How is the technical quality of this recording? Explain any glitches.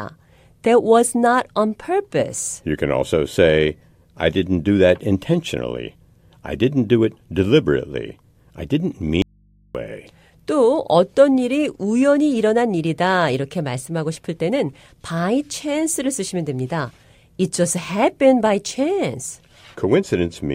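The recording has one clear glitch. From 9.22 to 9.75 s, about half a second, the speech drops out to a faint residue: the voice cuts off abruptly and only mains hum remains, roughly 35 dB below the speech. The likely cause is a momentary loss of the input signal while the downstream path stayed live, leaving the open input's hum audible until the signal returns.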